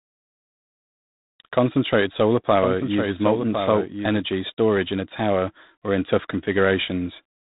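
From the very start the speech has that G.726 ADPCM sound: a harsh, rasping hiss that rides up and down with the level, and nothing above about 3.8 kHz. That grain fits the coarse 24 kbit/s mode, where each sample carries only a few bits of prediction error.

Between 2.58 and 4.22 s there's a doubled audio track: a second full-band copy, a few dB quieter, trailing about a second behind, with no room colour, cutting in and out abruptly. That's likely a slower second capture path or two misaligned copies in an edit.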